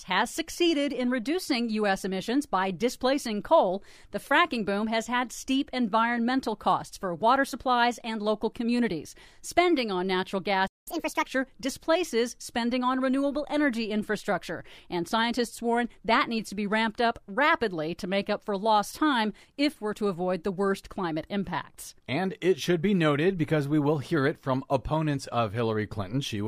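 A speech clip. Just after "on natural" the sound cuts to silence from 10.67 to 10.88 s, about 190 ms, a playback stall, likely the player running short of data. From 10.88 to 11.26 s, before "displaces spending on renewable", speech races at 1.5 times speed and about seven semitones higher: catch-up at higher speed, resampling to recover lost time.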